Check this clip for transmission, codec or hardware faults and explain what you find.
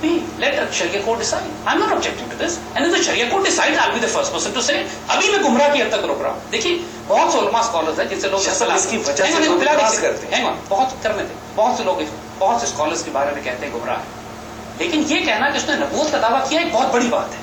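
Two faults are audible, one running through the whole clip and one brief dropout.

Throughout, quiet passages sound gritty and grainy, with distortion that tracks the signal. This is likely low bit depth without dither, consistent with 8-bit rounding and error roughly 35 dB below the signal.

At 9.20 s, a momentary concealment covers about 10 ms, which fits one lost LE Audio frame. The LC3 decoder refilled the gap with the previous spectrum under randomised signs.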